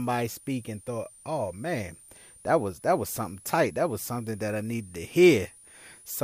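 From start to finish there's a switching supply whistle sitting under the speech: a thin, high tone wandering between about 9.0 and 10.2 kHz, centred somewhere near 10 kHz. It sits well below the speech in level. The cause is a switching power supply dropping into an audible burst mode or beating against another supply, so its pitch drifts as it runs.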